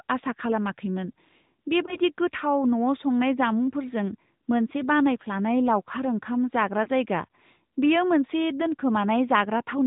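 Speech, heard through the AMR narrowband mobile codec for the whole clip. Nothing above 4 kHz comes through, so the voice is muffled and boxy. The codec rebuilds each sound from a vocal tract model driven by a few pulses, which leaves a plainly audible buzzy, synthetic edge. That degree of damage fits a mid-rate mode, around 10.2 kbps. Lost AMR speech frames interrupt it twice. The first dip runs from 1.86 to 1.98 s. The second runs from 6.84 to 6.90 s, just after "बानायफ्लानाय लावखार ओंखाम जाग्रा". Each one is a short warble or sag in level. That sound points to a single failed frame of about 20 ms. The decoder fills the gap by reusing the last good pitch and vocal tract settings at falling gain. The voice then returns briefly weak or rough.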